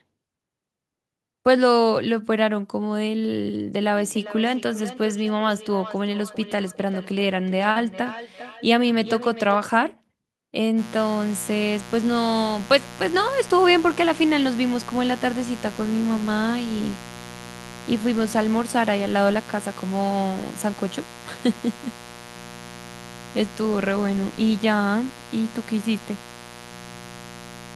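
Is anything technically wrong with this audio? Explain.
Yes, there are three faults.

Feedback echo between two devices runs from 3.9 to 9.66 s. A second device in the room plays the call back into a microphone whose echo canceller can't remove it, so speech returns roughly every 400 ms, thin and ringing, peaking about 15 dB below the speech.

Short concealed packet loss occurs from 7.71 to 7.79 s. About 40 ms of audio never arrived in time, and the receiver bridged 42 ms by extending the preceding sound before blending back, which comes across as a brief smear or wobble.

Mains buzz starts at 10.75 s and continues to the end. Sharp switching spikes from a dimmer, rectifier or poor shielding, occurring twice per 60 Hz cycle, add a ladder of harmonics reaching into the kilohertz range, heard as a steady raspy buzz around 15 dB below the speech.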